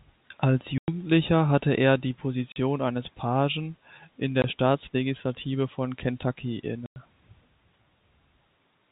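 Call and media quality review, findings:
Packet loss filled with silence. Dead holes in the speech at 0.78–0.88 s (100 ms), 2.52–2.56 s (40 ms), 4.42–4.44 s (20 ms) and 6.86–6.96 s (100 ms). Every gap is a multiple of 20 ms, which fits 20 ms packets dropped in the network or jitter buffer. The receiver inserts pure silence with hard edges, rather than concealment. Concealment would smear or repeat the last sound across the hole. Band-limited G.711 telephone coding is audible throughout, with no above-4 kHz content.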